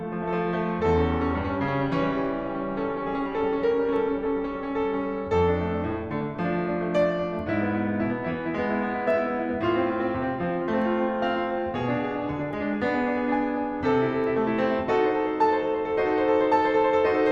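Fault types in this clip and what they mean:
Nothing to flag here: the music runs along without any dropouts, glitches or other technical faults turning up anywhere.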